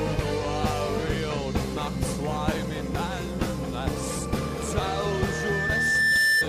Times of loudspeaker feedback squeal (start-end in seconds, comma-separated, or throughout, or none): 4.79-6.48